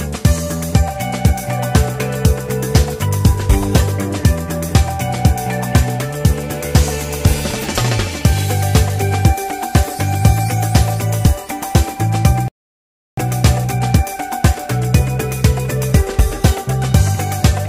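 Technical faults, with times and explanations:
12.48 to 13.18 s, rebuffering stall: the sound cuts to silence for about 0.69 s and then picks up exactly where it left off, because the player used up its downloaded audio and had to wait for more data before continuing. What separates this from a dropout or packet loss is that nothing is skipped or missing on either side of the gap. The material simply resumes intact, so the silence adds time instead of replacing any.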